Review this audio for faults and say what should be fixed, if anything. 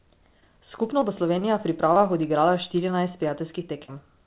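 Short concealed packet loss occurs at 0.40–0.43 s, 0.99–1.03 s, 1.94–2.02 s and 3.86–3.90 s. Each time about 20 ms of the speech never arrived in time, and the receiver bridged the gap by extending the preceding sound for 14 to 22 ms before crossfading back to the real signal. The result is a brief smear or wobble where a tiny slice of speech is gone. At 1.94 s the patch runs roughly 10 ms longer than the loss.

A short stall from a late packet occurs at 1.39–1.44 s. The jitter buffer ran dry while waiting for a delayed packet, so the receiver held the current sound for 22 ms and then resumed exactly where it stopped. Nothing is lost, but that moment is drawn out with a faint buzz or dip. The narrow band, with nothing above 4 kHz, fits a G.711 mu-law call path at 64 kbps.

To prevent these faults, stabilise the network route to reduce loss and jitter, and give the jitter buffer slightly more headroom.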